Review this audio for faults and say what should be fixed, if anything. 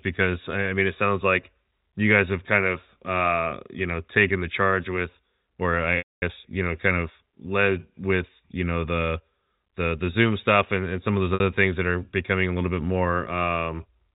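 Packet loss with pitch repetition at 5.98–6.22 s, right after "the charge with or", and 11.34–11.40 s, after "and some of those". The receiver loops the last pitch period to cover the gaps.

Adding jitter buffering or forward error correction on the network path would stop these dropouts.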